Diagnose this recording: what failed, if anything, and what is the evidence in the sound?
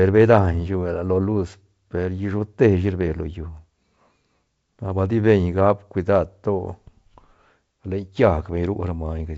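Nothing has failed; G.722 wideband coding at 64 kbit/s is intact.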